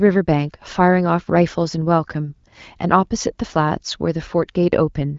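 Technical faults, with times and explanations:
No technical faults can be heard anywhere in this speech. It carries the band-limited character of the AMR wideband (HD Voice) codec, with nothing above 7.5 kHz and only light coding damage, which fits one of the codec's higher rates, around 15.85 kbit/s.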